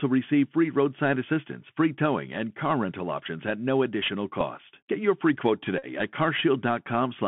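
From start to finish the speech passes through a Bluetooth CVSD headset codec, a one-bit delta modulator whose step size adapts, consistent with a 64 kbit/s stream. The line band runs from about 150 Hz to 3.4 kHz. On a spectrogram everything above that is empty, with a granular floor beneath the voice. The damage is plainly audible as scratchy sibilants, slope-overload distortion on loud bright sounds, and a grainy hiss.

At 4.41 s a Bluetooth headset packet is repeated. One lost voice packet of about 3.8 ms is replaced by replaying the previous packet's bits. It is heard as a small tick, and in the waveform a short stretch repeats.

From 5.78 to 5.86 s the same fault recurs as a run, covering about 41 ms of lost audio, which fits roughly eleven consecutive packets. Each slot repeats every 3.75 ms, producing a steady buzz near 267 Hz. On a spectrogram this shows as evenly spaced harmonic lines, and the waveform shows repeating segments until good packets resume.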